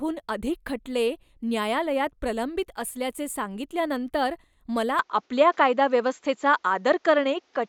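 The speech recording's input was likely switched to a poorer device at 4.99 s, with no gap at the switch. From there to the end, nothing above 7.6 kHz remains, so the sound turns duller, its level shifts by a few decibels, and a faint new background noise appears.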